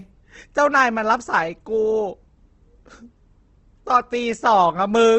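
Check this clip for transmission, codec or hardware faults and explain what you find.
One fault runs through the whole speech clip: the audio sounds rough and grainy, with plainly audible codec damage and nothing above 8.2 kHz. This is likely Opus compression at a low bitrate, which fits around 16 kbps. Starved bands get filled with noise or folded copies of lower bands, producing that grit, and the top end is cut off at wideband.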